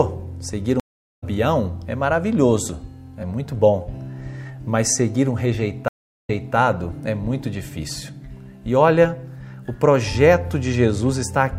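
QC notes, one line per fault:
0.80–1.24 s, stream reconnect: 409 ms flat-line gap in the waveform, then a fresh decoder resumes the audio about a fifth of a second later, skipping material.
5.88–6.56 s, stream reconnect: 389 ms blank column on the spectrogram, then playback restarts 287 ms earlier as buffered audio is resent, so a short stretch repeats.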